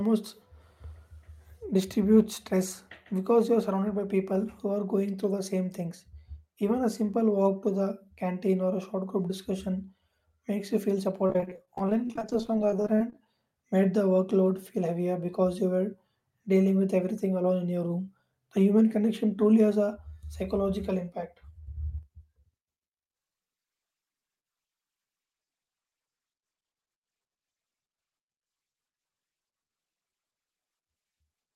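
Repeated packet loss from 11.26 to 13.26 s: dozens of gaps up to 27 ms were filled by extending earlier sound, leaving the speech choppy with pieces missing.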